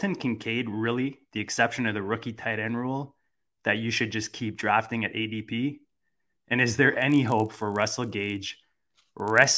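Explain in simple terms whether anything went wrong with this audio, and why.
Something does go wrong near the end of this speech clip. From 7.0 s to 9.58 s a steady buzz rides on the sound, caused by a resampler restarted on every block. The audio was converted in 20 ms chunks, each handled alone, so every chunk edge gets a tiny error, fifty times a second. Unlike mains hum, this buzz is heard only while there is sound and drops away in the gaps.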